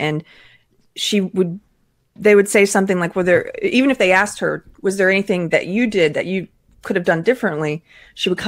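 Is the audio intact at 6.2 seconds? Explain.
Yes, at 6.2 seconds the audio is intact, with no dropout, glitch or other fault audible at that moment.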